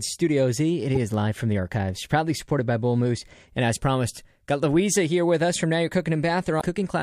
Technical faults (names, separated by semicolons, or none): damaged data in a compressed stream